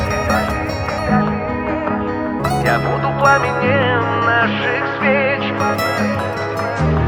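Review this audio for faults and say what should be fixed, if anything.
At 2.39 to 2.41 s the sound jumps forward abruptly, with no silence at the join, and roughly 0.7 s of material is simply gone. This skip ahead happens when a stretch of audio is discarded in transit or flushed by an overflowing jitter buffer while later audio is already queued. To prevent it, size the jitter buffer with enough headroom and drain excess delay gradually with time-scaling rather than dropping whole chunks.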